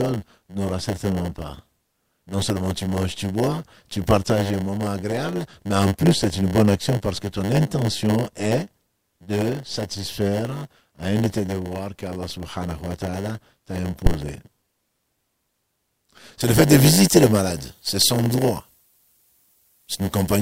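Speech runs throughout with a block size mismatch (padded): each block arrives short and is topped up with zeros, leaving a 100 Hz buzz and a delivery about 8% slow (0.919 times normal speed) at roughly unchanged pitch. A spectrogram shows thin vertical gaps every 10 ms and a 100 Hz harmonic comb. At 14.06 to 14.15 s a phantom power thump appears, a supply switched on or off on a live input sending a step through the coupling capacitors. It is a deep knock decaying over about 19 ms, visible on the waveform as one large low-frequency swing and as a dark smear at the bottom of the spectrogram. From 16.41 s to the end, pre-emphasis left on boosts the treble on a 75 µs FM curve by about 14 dB at 10 kHz relative to 1 kHz, making the speech thin and sibilant, with a visibly denser upper band on the spectrogram.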